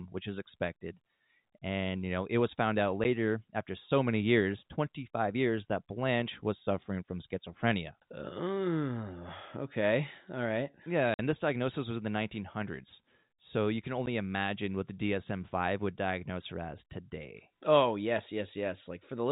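A speech recording, band-limited at 4 kHz by G.711 telephone coding, is broken by packet loss filled with silence. There are brief dropouts at 3.04 s and 14.06 s, each about 10 ms, and a 50 ms hole from 11.14 to 11.19 s, which fits 10 ms packets. Each appears as a flat silent gap in the waveform and a clean vertical stripe on the spectrogram, with hard edges.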